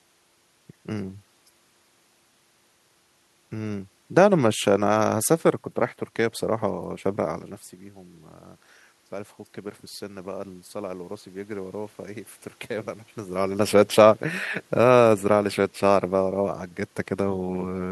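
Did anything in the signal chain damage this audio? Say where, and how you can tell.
Yes. From 9.09 to 12.01 s, speech and room noise swell together by about 4 dB. This is automatic gain rising in call processing, reacting to a roughly 15 dB input drop.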